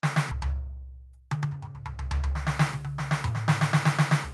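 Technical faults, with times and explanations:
0.31 to 0.33 s, skip ahead: roughly 0.7 s of music was dropped while later packets were already waiting. Nothing was filled in, so playback leaps forward and the two edges of the music butt straight together.
0.44 to 1.75 s, jitter buffer speed-up: still holding more audio than its target, the receiver repeatedly cut out short pitch-period slices, about 0.2 s in total. The music plays at 117% speed with its pitch unchanged, so the tempo rushes and loses its steadiness.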